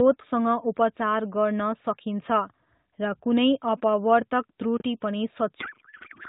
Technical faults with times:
4.77-4.81 chunks out of order
5.60-6.29 codec payload misread

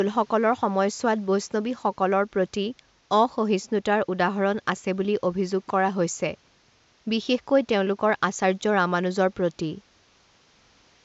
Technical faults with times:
none

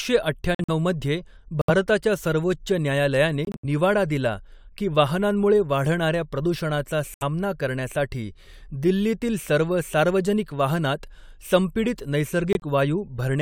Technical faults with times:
0.54-0.70 corrupt frame muted
1.61-1.70 corrupt frame muted
3.45-3.65 corrupt frame muted
7.14-7.23 corrupt frame muted
12.53-12.64 corrupt frame muted

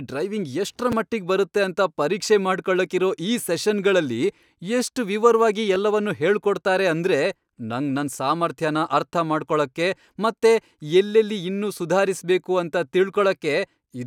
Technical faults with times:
0.92 chunks out of order
5.74 chunks out of order

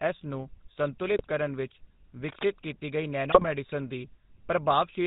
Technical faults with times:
0.00-5.06 GSM full-rate codec
1.14-1.25 GSM bit errors
3.30-3.47 GSM bit errors

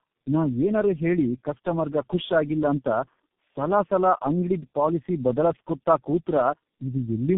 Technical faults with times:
0.00-7.38 tandem speech coding

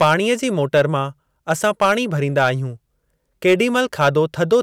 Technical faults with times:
0.01-0.14 hard clipping
0.75-0.81 hard clipping
1.50-1.92 hard clipping
2.38-2.49 hard clipping
3.47-4.56 hard clipping

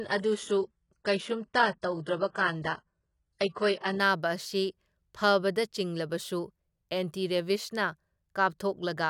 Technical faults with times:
0.00-4.00 adaptive stream starting at a low bitrate

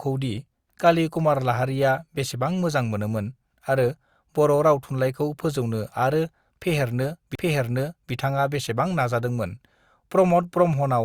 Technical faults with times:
7.35-7.39 CD skip

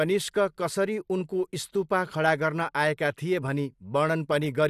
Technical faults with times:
none

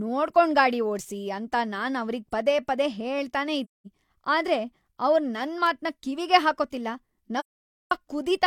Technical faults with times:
3.64-3.86 AAC frame loss with muting
5.66 bit error spike
7.39-7.92 AAC frame loss with muting

